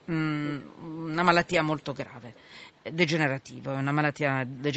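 Speech with an echo leak: faint delayed copies appear from 0.02 to 0.07 s and from 2.21 to 2.94 s, trailing the speech by about 0.36 s. On a spectrogram they show as weak repeats of earlier speech bands, far below the main signal, likely escaping a loudspeaker-side echo canceller.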